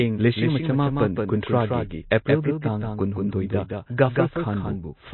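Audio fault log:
throughout, doubled audio track: a second copy of the speech is likely being mixed in from a slower capture path or from an edit that holds two copies out of step. That copy runs about 200 ms behind and roughly 5 dB quieter, and it keeps the full band with no decay or room colour. Every syllable is followed by a clean repeat, which reads as a flat echo rather than reverberation.
throughout, MP3 compression: the speech has likely been through MP3 encoding at a low bitrate, around 24 kbps. At that rate the encoder runs short of bits, so it drops weak frequency lines, which come and go from frame to frame, and it cuts the treble. Nothing is heard above 4.1 kHz, so the sound is dull. The codec damage is plainly audible as a watery, swirling texture with smeared onsets.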